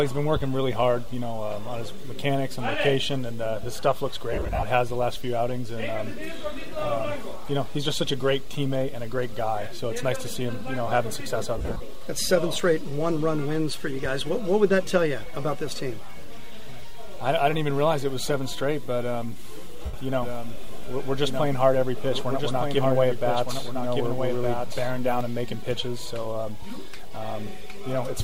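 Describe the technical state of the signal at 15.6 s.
At 15.6 s the audio is intact, with no fault to be heard at that moment.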